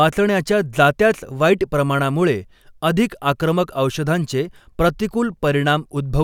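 No technical faults can be heard in this recording.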